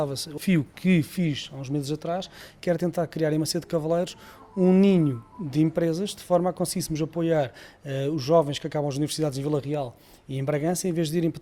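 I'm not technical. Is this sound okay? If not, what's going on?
No. There are two problems. The first is a skip ahead at 0.37 to 0.39 s. About 0.4 seconds of sound was dropped, and playback jumps straight to later audio with almost no gap, so the two sides butt together abruptly.

The second is a jitter buffer speed-up from 2.63 to 3.21 s. The receiver had stored more audio than it wanted, so it trimmed many tiny slices to catch up. That stretch plays about 6% faster at the same pitch and sounds slightly hurried.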